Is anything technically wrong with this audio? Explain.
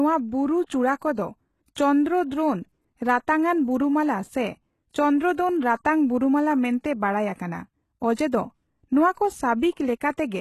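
Yes. Throughout, the speech has gritty, metallic sibilants and a treble that sounds synthetic, with nothing above 12.3 kHz. This is likely HE-AAC compression at a low bitrate, around 16 kbps, rebuilding the upper band from copied lower bands whose harmonics fail to line up.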